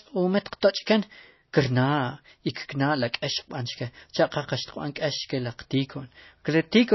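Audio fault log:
throughout, MP3 compression: The audio was likely squeezed through an MP3 encoder at a very low bitrate, one that fits about 24 kbps. With so few bits, the encoder discards weaker frequency components, and which components survive changes from frame to frame, so the speech takes on a plainly audible watery, swirling texture and its attacks smear. The encoder has also cut everything above 5.8 kHz, leaving the speech dull and without its upper treble.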